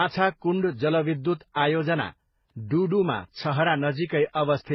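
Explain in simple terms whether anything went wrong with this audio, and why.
Transcoding between lossy codecs is the likely cause of the dull, smeary quality heard throughout the whole clip. The speech seems to have been squeezed by one compression format and then re-squeezed by two more. Each pass wastes effort preserving the previous pass's damage while adding its own, so different kinds of swirly, watery distortion pile up. Everything above about 5.9 kHz is also gone, which makes the speech sound muffled.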